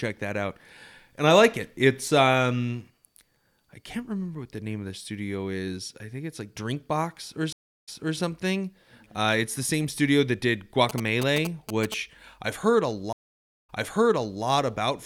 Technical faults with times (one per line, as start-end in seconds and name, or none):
7.53-8.18 stream reconnect
10.89-11.94 GSM signalling bursts
13.13-14.45 stream reconnect